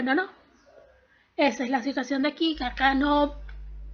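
At 2.53 s a mains hum comes in and stays to the end: a steady 50 Hz drone, around 15 dB under the sound, with a few low harmonics. That's the power line leaking into the signal through a ground loop or a nearby transformer.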